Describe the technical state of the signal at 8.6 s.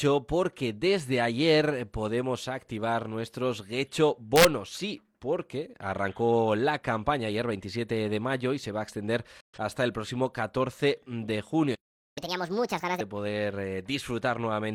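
At 8.6 s the signal is intact, with no dropout, distortion, noise burst or other fault present at that moment.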